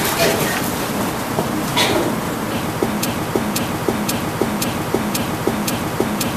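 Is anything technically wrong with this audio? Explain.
Yes. From 3.05 s to the end, a broken-record loop: one 0.53 s fragment repeats identically six times, likely from a stalled stream. Unlike echo, nothing decays.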